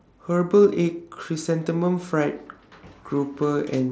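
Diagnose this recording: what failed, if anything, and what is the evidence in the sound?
Nothing failed; no faults found.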